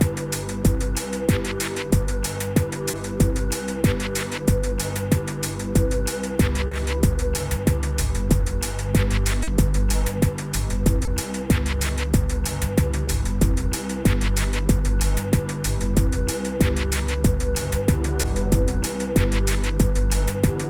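Short concealed packet loss occurs at 2.91, 6.67, 9.43, 11.05, 13.05 and 18.21 s. Each time, 20 ms of audio (40 ms at 6.67 and 9.43 s) missed decoding, and the receiver extrapolated from the preceding sound, producing a brief smear or wobble.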